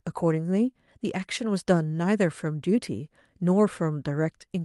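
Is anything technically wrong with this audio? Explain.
No, nothing technical stands out in this speech recording, so there's no fault here to explain.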